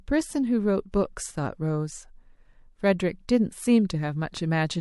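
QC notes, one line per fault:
0.92 s, pre-echo: a short hiss creeps in about 19 ms ahead of a sharp attack, roughly 13 dB above the quiet before it. The codec never switched to short blocks, so noise sized for the attack smeared back across what sounds like a 36 ms window.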